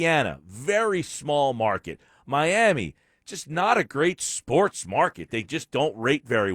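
Speech, with a single sharp click at 5.56 s. It sounds like dropped samples: likely a couple of samples went missing, making the waveform jump abruptly.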